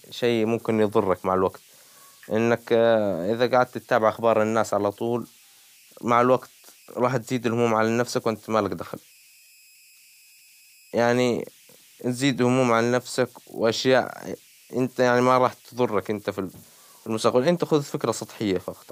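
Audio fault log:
Throughout: converter idle tones. A faint high whistle sits under the speech, most audible in the pauses, where it chirps at a pitch somewhere around 3 kHz. Under quieter syllables it turns into a grainy hiss, about 32 dB below the signal. The cause is a delta-sigma converter running without dither: with little input it settles into repeating bit patterns, and those patterns come out as tones whose pitch follows the input's small offset.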